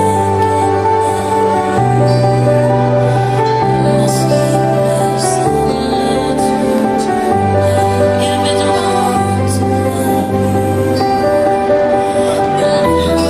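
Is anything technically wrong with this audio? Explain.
Yes. From 10.20 to 10.32 s there is AAC frame loss with concealment. A gap of about 85 ms, consistent with two lost frames, was filled from the previous spectrum. It sounds like a brief smeared, phasey patch and shows on a spectrogram as a blurred, flattened block.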